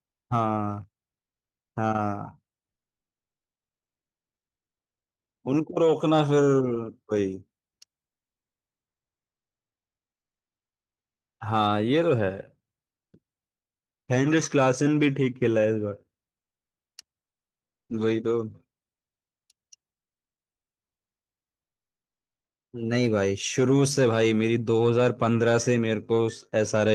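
From 19.95 to 22.71 s, about 2.8 seconds, the real background drops out and comfort noise in place of the background takes over: a flat, featureless hiss roughly 20 dB quieter. The likely cause is discontinuous transmission, consistent with Opus DTX, with the receiver synthesising filler during the pause.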